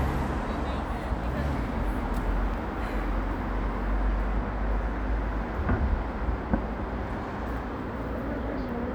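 At 2.54 to 2.56 s, a single loud pop rises about 5 dB above the sound, which continues underneath. A likely voltage spike from a switch or static caused it.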